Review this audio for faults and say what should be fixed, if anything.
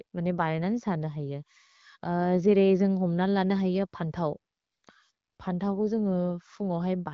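Nothing here needs fixing: the speech comes across the AMR wideband (HD Voice) codec at 12.65 kbit/s, with its top end stopping at 7 kHz as that path does, and there's no fault to chase.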